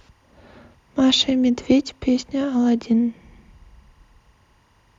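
A speech recording with timecode bleed running throughout: a faint, steady chirping warble sits far beneath the talker, at roughly 45 dB below the speech, flipping between pitches near 1 and 2 kHz. Linear timecode leaking from an adjacent track or cable is the cause, its pattern repeating at 23.976 frames per second. Unlike a single whistle or mains hum, the pitch keeps toggling in a clocked, data-like rhythm.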